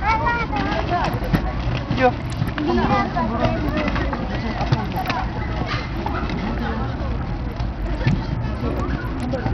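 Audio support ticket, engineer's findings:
Bluetooth SBC compression, throughout: treble drops out and flickers, gritty noise and aliasing on the sound. Likely an SBC link starved of bits, consistent with roughly 64 kbps; top sub-bands lose their allocation.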